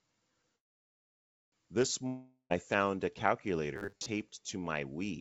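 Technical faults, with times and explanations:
0.56–1.54 s, call audio freeze: the sound stalls for nearly a second, the last bit trails off into a fading buzz and then near silence, and it picks up right where it left off. Packets were likely held up, so the jitter buffer ran dry and nothing was lost.
2.07–2.52 s, long network dropout: about 0.44 s of audio never arrives. The receiver stretches the last sound into a decaying hiss, which gives way to a short silence near the end, and the sound resumes further on with that chunk gone, likely from lost packets.
3.76–4.06 s, robotic sound from repeated short buffers: for about 0.3 s the sound becomes a stiff, metallic 100 Hz buzz that only loosely tracks what's underneath. Most of that stretch is the same tiny slice looping, which fits a 10 ms buffer being likely replayed while fresh audio arrives too slowly.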